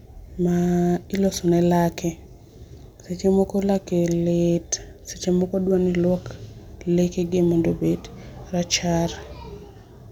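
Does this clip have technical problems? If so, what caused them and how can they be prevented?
No, nothing in this speech recording stood out as a technical problem on listening, so there is nothing here to trace back or prevent.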